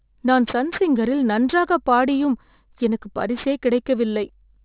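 The speech was downsampled without anti-aliasing filtering throughout, so energy above 4 kHz folds back as aliasing, making sibilants gritty and metallic.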